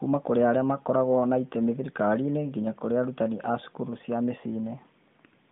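No technical faults can be heard in this speech recording. It has passed through the AMR narrowband mobile codec, with the band running from about 150 Hz to 3.6 kHz, nothing above 3.7 kHz, and only light coding texture, which fits the codec's 12.2 kbps mode.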